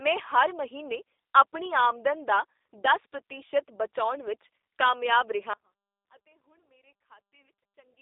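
A speech clip that sounds band-limited, slightly rough and synthetic throughout, with plainly audible codec damage and nothing above 3.7 kHz, the line band sitting at about 300 Hz to 3.7 kHz. That character points to the G.729 codec, most likely G.729A at 8 kbit/s, which rebuilds the speech from a vocal tract model, a pitch predictor and a few pulses per frame rather than the original waveform. At 5.54 s, right after "ਵਿੱਚ ਕਾਮਯਾਬ ਰਿਹਾ", the sound cuts out abruptly and stays out to the end, leaving only faint sound roughly 30 dB below the speech level. This is likely an audio dropout to a faint residue, where the wanted signal was lost but the path after the break stayed live.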